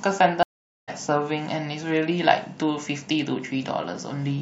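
At 0.43 s there's a stream reconnect: the speech drops out for about 0.45 s while the link re-establishes, then resumes around 0.9 s, roughly 0.4 s further along.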